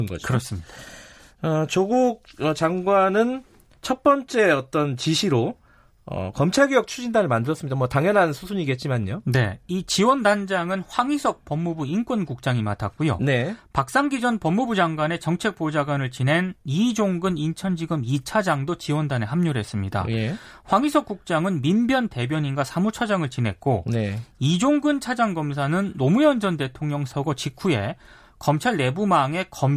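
No technical faults are audible.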